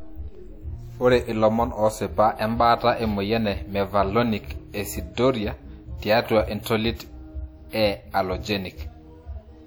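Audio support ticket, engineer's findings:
Whole clip: ringing, washy speech with hiss that breathes along with the level. Likely WMA compression; damage plainly audible, fits something around 48 kbps. Transform blocks smear quantisation noise across tens of ms, weak lines get zeroed. Band stops at 20.1 kHz.

Pre-echo at 6.63–6.66 s and 7.69–7.73 s: short hiss ahead of sharp onsets, attacks soft. Same codec. Noise sized for the loud transient spreads back through its block, filling the quiet gap, 34 ms and 39 ms ahead.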